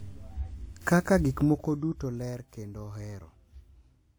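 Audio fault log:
Throughout, generation loss: the speech has a swirling, hollow quality and smeared consonant attacks, with built-up coding noise that is heavier than a single lossy encode at this quality would leave. The likely cause is repeated lossy coding, about three passes through a WMA-type encoder at a rate that fits 96 kbit/s. Each pass requantises on a shifted frame grid, so noise and spectral holes accumulate. Content still reaches about 20.1 kHz. The hollowness comes from stacked passes rather than from a low bitrate, which would instead cut off the treble.
1.28 to 2.35 s, zipper noise: the level falls by roughly 15 dB over about a second, but a fine ticking, buzzy roughness rides on the speech for exactly that stretch. The gain moves in discrete jumps at around 100 per second with no interpolation between them. Each jump puts a small discontinuity in the waveform, and the run of them forms a zip at the step rate. 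A smooth fade would drop the level without adding this texture.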